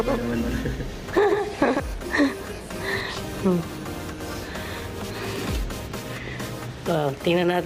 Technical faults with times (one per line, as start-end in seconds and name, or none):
0.00-1.80 doubled audio track